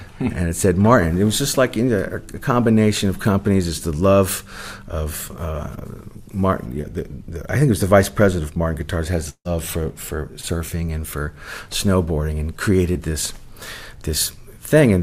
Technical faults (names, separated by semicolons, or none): short concealed packet loss; long network dropout